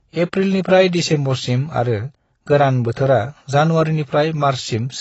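From the first moment, the speech sounds dull and smeared. Nothing reaches above 7.9 kHz, so the top of the spectrum is simply missing. Sibilants turn fizzy, and held sounds take on a warble. The damage is plainly audible. This is likely AAC compression, and the texture fits AAC-LC at a low bitrate around 24 kbps. At that rate the encoder drops high bands and quantises coarsely against its hearing model.

At 0.32 s there is pre-echo. A sharp attack sits late in a transform block. The codec spreads its quantisation noise across that whole block. So noise sized for the loud onset also fills the quiet gap just before it. The result is a brief hiss of about 10 ms ahead of the attack. The onset itself sounds softened and blurred rather than crisp.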